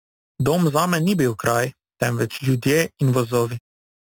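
A bright, metallic fizz follows the speech's loudness throughout, with a mirrored band from 4 to 8 kHz sitting about 16 dB below the signal. This is imaging from sample-and-hold upsampling: samples were repeated without smoothing, which fits 8 kHz audio raised to 48 kHz.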